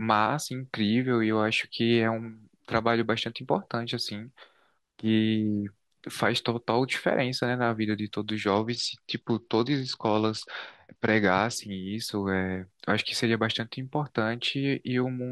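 At 8.47 s the speech suddenly loses its top end. This is a Bluetooth SBC bit pool drop, lasting about 3.1 s until 11.56 s. The link was struggling, so the encoder cut the bits it spends per frame. The highest sub-bands got almost nothing, and the rest were quantised coarsely. The voice turns dull and muffled, with a gritty noise underneath. The sound points to a fall from a bit pool of 31 to about 9, roughly 72 kbps.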